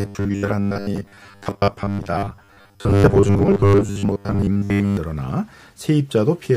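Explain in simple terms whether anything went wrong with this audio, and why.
Something likely went wrong with how the audio was being delivered: new sound arrived too slowly, so the playback kept filling the gaps by looping the last tiny slice, about 10 ms long, most of the time. That produces robotic sound from repeated short buffers. From 0.01 s to 4.97 s the speech becomes a stiff, metallic buzz stuck at about 100 Hz, still loosely following the talking.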